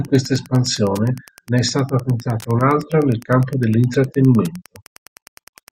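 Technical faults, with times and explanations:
Throughout, Wi-Fi interference: faint ticks every 102.4 ms, about 30 dB below the speech, come from a nearby radio's rectified beacon and are sparser than mobile-phone buzz.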